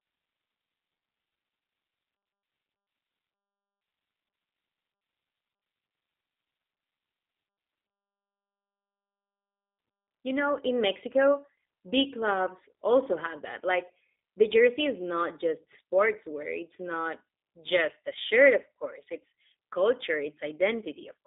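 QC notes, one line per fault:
Throughout, G.729 codec: the speech passed through an 8 kbit/s G.729A VoIP path, which models each 10 ms frame as a vocal tract filter, a pitch predictor and a few pulses. Nothing above 3.8 kHz survives, leaving a 200 to 3700 Hz line band, and the plainly audible codec damage makes the voice sound rough and synthetic.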